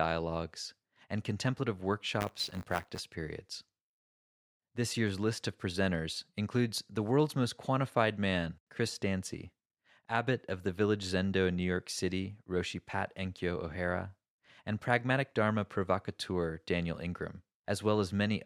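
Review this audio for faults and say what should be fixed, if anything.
Buffer tearing runs from 2.2 to 3.0 s. A robotic rattle sits on the speech at 100 Hz, which points to a 10 ms buffer period. The playback writer and the hardware reader have slipped into each other. Each period now carries a small slice of stale audio, roughly 20 ms old, with hard joins on both sides. Fix it by keeping the write position safely ahead of the read pointer, with enough headroom to absorb scheduling delays.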